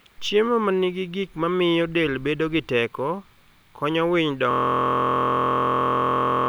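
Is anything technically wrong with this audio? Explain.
Yes. From 4.51 s, right after "konyo winy", the audio falls into a system hang loop that lasts to the end of the clip. The machine or its audio driver stalled while the sound hardware kept replaying one filled ring buffer. A 23.22 ms slice, which fits a 1024-sample buffer, repeats identically about 85 times, producing a steady buzz at 43.1 Hz. Unlike packet-loss concealment, the repeats never fade, vary or recover.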